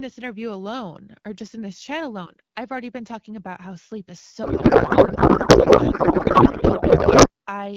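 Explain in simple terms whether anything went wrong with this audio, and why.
Two things went wrong.

Sample clock jitter runs through the whole clip. The clock that times each sample wobbles by roughly a millionth of a second, so samples land slightly early or late. That adds a faint hiss or roughness that is strongest on loud, bright parts of the speech and disappears in pauses. Because it follows the speech and vanishes in silence, it is not steady background noise.

A codec payload misread starts at 4.43 s, right after "about how sleep is", and lasts until 7.29 s. The speech is replaced by garbled noise and warble that barely follows it. This points to the sender packing the wideband phone codec's bits one way and the receiver unpacking them another way, which fits an octet-aligned stream read as bandwidth-efficient. The fault has a sharp start and end and sounds like steady garbage instead of gaps, so it is not dropped packets.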